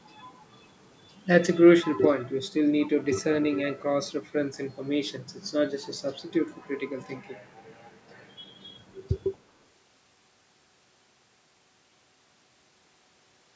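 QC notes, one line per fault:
0.03–0.15 s, 1.82–2.01 s, 2.85–2.91 s and 9.33–9.41 s: echo leak. Brief delayed copies of the speech trail the original by 228 ms and appear as short scraps. The strongest, at 1.82 s, sits about 15 dB below the speech. The one at 2.85 s is about 25 dB down, and those at 0.03 s and 9.33 s are faint at about 35 dB down. The likely cause is a far end on loudspeaker whose echo canceller failed to remove part of its microphone pickup and sent it back down the line.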